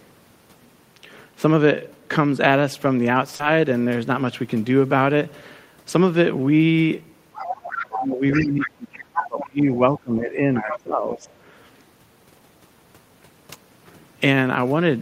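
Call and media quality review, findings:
Short concealed packet loss, 3.35–3.42 s: 40 ms gap filled by decoder extrapolation, heard as a brief smear. Spectrogram shows a smoothed continuation of the preceding sound, then a crossfade back into real audio.

Other side's voice leaking through, 7.34–7.98, 8.33–8.40, 8.61–8.67, 9.15–9.44, 10.71–10.79, 11.13–11.18 s: second voice, likely residual loudspeaker echo missed by the AEC. Sits roughly 10 dB under the talker, closer at 9.15 s, fainter at 11.13 s. It shows as weak harmonic traces.

Speech suppressed in double talk, 7.9–10.44 and 10.6–11.3 s: talker level dips while the echo is present, likely the AEC suppressor attenuating both sides. Drops of roughly 20–25 dB show as dips in the waveform envelope.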